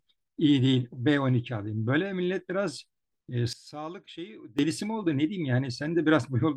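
A digital gain setting was likely applied without any ramp at 3.53 s, a sudden gain jump that cuts the level by about 17 dB in a single step. The speech and its background noise drop together, then snap back up at 4.59 s.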